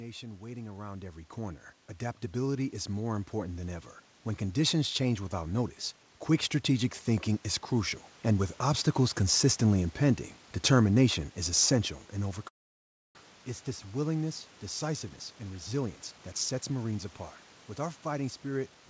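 From 6.64 to 9.48 s the level climbs by about 3 dB as automatic gain rising takes hold: the gain control judged the input too quiet and raised it slowly. Voice and room noise swell together, which separates it from a talker moving closer, where only the voice would change.

At 12.48 s the sound breaks up until 13.17 s. The last sound is stretched into a fading buzz, then gives way to near-silence, and about 0.4 s of audio never returns. This is likely a long network dropout, not a brief packet loss, given the length of the gap.

From 15.09 to 17.06 s a jitter buffer speed-up runs the speech at about 113% of normal rate, trimming around 0.3 s of backlog left by the delay that built up at the dropout. Pitch stays unchanged, so it sounds hurried rather than higher, unlike a sample-rate error.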